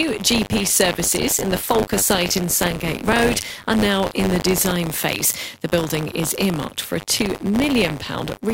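A steady robotic buzz at 100 Hz rides on this speech throughout, from buffer tearing: in each period, about a tenth holds audio from roughly 40 ms earlier, spliced in with hard joins.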